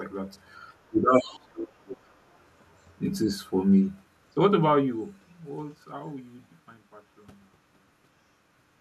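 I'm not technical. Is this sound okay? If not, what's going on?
No. Early on, the speech suppressed in double talk problem shows up twice: from about 0.89 to 1.29 seconds and again from 1.51 to 2.1 seconds, the voice suddenly sinks, going much quieter and duller, or dropping out in pieces. The likely cause is that someone on the other end of the call spoke at the same moment, and the echo cancelling confused the two and turned everything down. That sets it apart from a simple bad connection, which would garble the sound rather than just muffle it.

There is also the other side's voice leaking through, between about 1.14 and 1.39 seconds: a faint second voice, well below the main one, slips in underneath. It likely comes from the far caller's voice playing on this person's loudspeaker and not being fully removed from the microphone. Unlike background chatter in the room, it partly overlaps with the first dip above.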